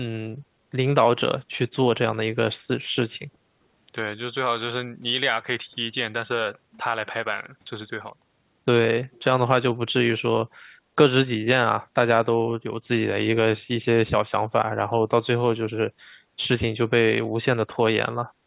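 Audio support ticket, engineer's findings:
Echo leak, 9.12–9.24 s: very faint, brief delayed copy of the speech, about 382 ms behind the original. Likely cause is the far end's loudspeaker pickup not fully removed by its echo canceller. It is a discrete late repeat, not room reverb smearing the tail. The audio is band-limited to 4 kHz throughout, consistent with the G.711 call path.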